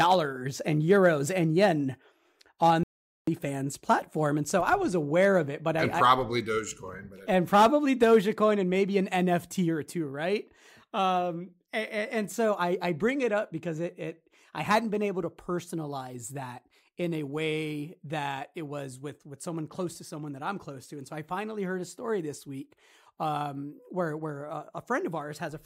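A speech clip with a playback stall from 2.83 to 3.27 s: the sound cuts to silence for about 440 ms, then resumes at "platform and so I", likely from the player running out of buffered data.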